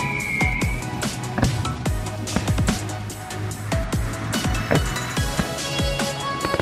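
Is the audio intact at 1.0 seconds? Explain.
Yes, the audio is intact at 1.0 s, with no dropout, click, distortion or other fault at that moment.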